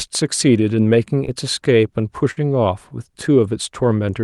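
At 1.25 s there is a short concealed packet loss lasting about 34 ms. A small slice of the speech did not reach the decoder in time. The receiver covered the hole by carrying the preceding sound forward for about 15 ms, then blended back into the real signal. About 20 ms of speech is gone. It is heard as a brief smear or wobble. A short consonant there may simply vanish.

From 2.31 to 2.39 s comes a burst of packet loss. Here the gap is longer, about 77 ms in all. The receiver again extended the last sound, this time for about 56 ms, turning it down as the gap went on. A voiced stretch becomes a held buzz and a noisy one a fading hiss. Speech then resumes further on, with about 60 ms missing. The Opus coding keeps its normal upper limit near 12 kHz throughout.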